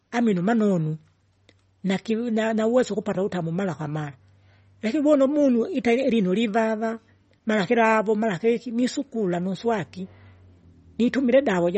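From start to finish the speech carries plainly audible codec damage, most likely from MP3 compression at a low bitrate, which fits about 32 kbps. Nothing survives above 8.4 kHz, and weak spectral detail flickers in and out between frames, giving s sounds a watery, swirly edge with metallic chirps. A simple low-pass filter would dull the top the same way but leave the remaining sound steady rather than warbling.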